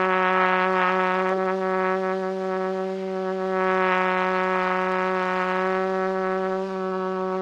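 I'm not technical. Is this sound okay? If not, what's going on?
Yes, no faults are audible.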